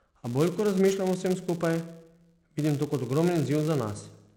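A steady buzz at 200 Hz runs through the whole speech clip. It comes from a filter restarted on every block. The filter drops its memory at each block boundary and begins again from silence. Each restart leaves a small transient. These transients repeat 200 times a second, so they fuse into a buzz. That rate points to short blocks, 5 ms each. The buzz rises and falls with the speech level.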